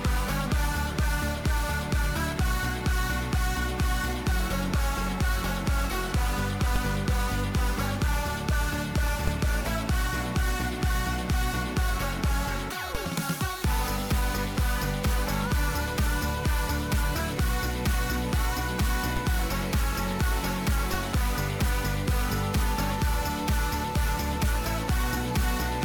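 The zero line of the audio jumps in a DC step, by about -16 to -17 dBFS, at 6.76, 9.28, 12.95, 19.17 and 20.94 s. Each offset then bleeds away through a 20 Hz high-pass, so every jump lands as a short, low thump beneath the continuing sound.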